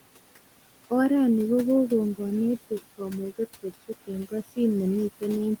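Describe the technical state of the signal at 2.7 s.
At 2.7 s the background noise drops away in the gaps between words and swells back up beneath them. These are noise suppressor artifacts, present across the whole clip rather than at this moment alone. The suppressor judges each frequency band frame by frame, pulling down whatever it takes for steady noise by about 17 dB. The room noise, which sits about 17 dB below the speech, therefore pumps in and out with the talking.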